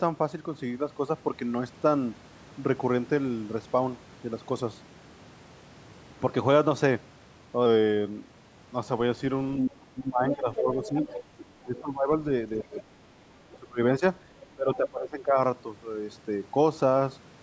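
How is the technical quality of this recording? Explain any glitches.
The second half of this call recording has echo-control problems, with two kinds of glitch alternating from about 9.6 s to 15.4 s. The band tops out around 8 kHz, as expected from call microphone processing.

Other side's voice leaking through: a second voice sits audibly behind the talker at 9.6 s, 10.29–11.8 s, 12.59–13.58 s and 14.41–14.89 s. Early on it is nearly as loud as the talker, and later it is much fainter. This is likely residual loudspeaker echo the canceller missed.

Speech suppressed in double talk: the talker's own level drops at 9.64–10.99 s, 11.63–12.85 s and 13.49–15.38 s. The drops are roughly 15 to 20 dB at their deepest and chop away about 0.7 to 1 second each time. This is likely the canceller ducking both voices during overlap.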